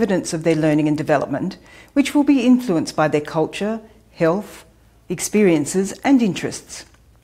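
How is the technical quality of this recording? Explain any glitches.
The technical quality of this recording holds up, with no glitches to explain.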